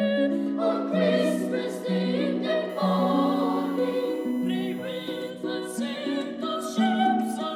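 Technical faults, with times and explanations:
2.69–5.31 s, USB whine: a fixed 1 kHz whine, strongest at 2 kHz and roughly 25 dB under the sound, from the bus's 1 ms frame current leaking through power or ground.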